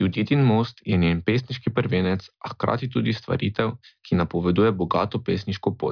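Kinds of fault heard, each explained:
Nothing stood out on listening to this speech recording.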